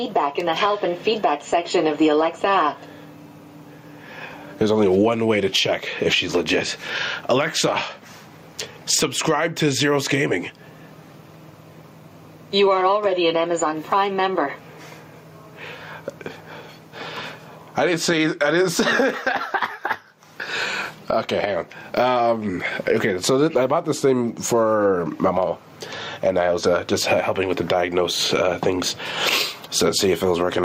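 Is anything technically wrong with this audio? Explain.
Yes. Gain pumping runs through the whole clip. The level breathes audibly, a swing of around 20 dB. The likely cause is input gain set far too high for the microphone, with a fast limiter or compressor clamping down on each peak and releasing in the pauses. Loud and quiet passages end up squashed toward the same level, and the sound feels crushed and unsteady.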